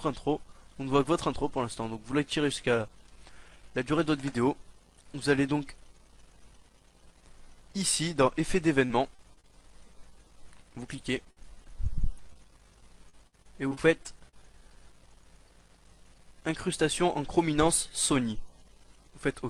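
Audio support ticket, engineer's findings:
Repeated packet loss (robotic sound), 8.85–9.48 s, 10.96–11.70 s, 13.09–14.34 s: choppy stretches with pieces missing. Network jitter/loss; receiver concealment extends the last sound across gaps up to 57 ms, covering 12–20% of each stretch.

Short concealed packet loss, 12.33–12.37 s: brief smear. A 20 ms hole was filled by continuing the preceding sound, then crossfaded back into the received audio.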